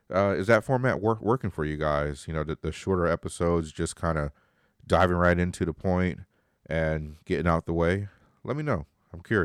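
Nothing in the recording stood out as a technical problem on listening.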